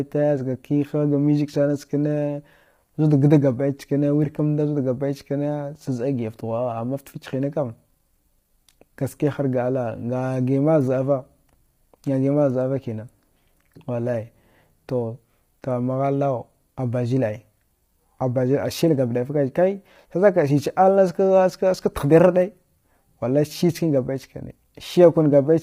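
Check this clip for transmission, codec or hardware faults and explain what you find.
One codec fault runs through the whole speech clip, with no other fault heard alongside it.

Low-delay AAC compression, throughout: the speech is likely coded with AAC-ELD, the low-delay variant used for video calls. Its very short frames give poor frequency resolution, so pitch harmonics are smeared and noise fills the gaps between them. The damage is heavy, which fits a low bitrate of around 24 kbps. The voice sounds rough and grainy, and the top band thins into a synthetic texture, with nothing above 15.6 kHz.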